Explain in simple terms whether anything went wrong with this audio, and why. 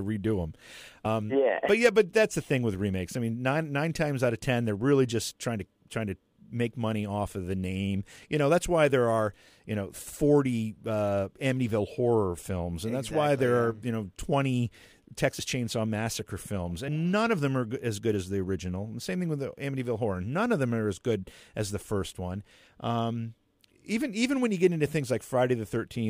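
Compressed frames were skipped: chunks of the encoded speech never reached playback, so the audio jumps ahead with a brief smeared blip at 1.05 s (about a tenth of a second lost), then at 15.39 s and at 16.88 s, just before "none of them are" (roughly one frame each).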